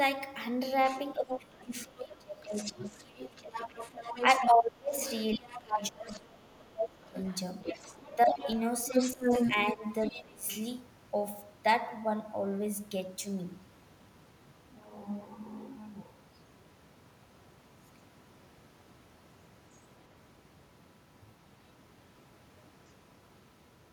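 Other side's voice leaking through appears from 0.87 to 1.64 s, about 5 dB below the speech. The likely cause is loudspeaker playback reaching the microphone and not being fully cancelled. Speech suppressed in double talk follows from 1.14 to 3.59 s. The speech dips by up to about 25 dB while both sides overlap, likely because the echo canceller ducked everything it could not separate. The leak returns from 2.55 to 4.47 s, quieter at about 10 dB down. Suppression recurs from 4.39 to 7.16 s, again reaching about 25 dB, with leakage at about 5 dB down from 5.03 to 6.17 s. From 7.03 to 10.23 s the other side is roughly as loud as the speech itself. Suppression of up to about 20 dB overlaps it from 8.25 to 10.47 s.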